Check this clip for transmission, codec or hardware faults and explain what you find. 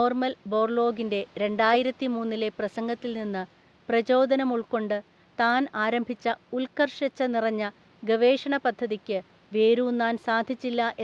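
No transmission, codec or hardware faults.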